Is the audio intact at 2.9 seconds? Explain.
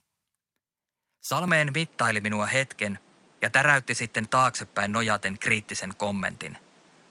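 No. From 1.48 s to the end, the speech turns duller and boxier with no gap at the change, most likely because the input switched to a poorer device. A spectrogram shows nothing above 10.4 kHz and a faint new noise floor; the waveform steps in level by about 5 dB.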